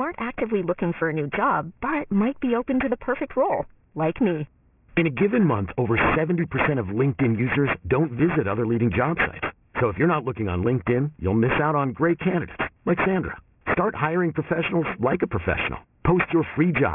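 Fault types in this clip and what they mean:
aliasing: the speech was downsampled to about 6 kHz with no anti-alias filter, so content above 3 kHz folds back as gritty, metallic tones only about 10 dB down.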